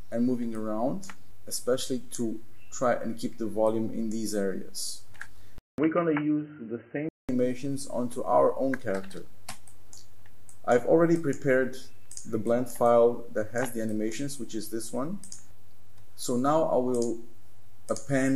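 At 5.58 s there's a gap of about 200 ms, and then the sound comes back dull and boxy, with nothing above 3 kHz, until it opens up again at 7.29 s. The loudness stays about the same, and there's a faint new background noise well below the signal. That's most likely the input switched to a poorer device, something like a headset's call profile taking over briefly with its narrower band and its own noise floor.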